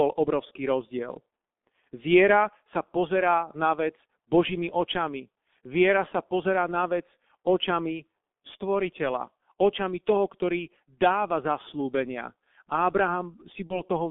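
From start to finish the speech sounds muffled and hoarse, with consonants smeared together and no brightness above about 3.5 kHz. The lowest bass below roughly 150 Hz is also absent. This is the G.723.1 codec, heavily applied. Its long 30 ms frames and slowly updated model of the voice cannot track fast changes, so crisp sounds blur. The narrow band and coarse grain point to a bitrate near 6.3 kbit/s.

Near the very end, from 13.67 to 13.81 s, the voice briefly turns into a stretched buzzy tone or coloured noise that fades and then sounds weak or distorted before recovering. This is VoIP packet loss concealed by the speech codec. About 30 ms of audio went missing, which fits one lost frame. The decoder filled the gap by repeating its last pitch and filter settings at falling gain. Because each frame builds on the previous one, the damage lingered for tens of milliseconds after the packets returned.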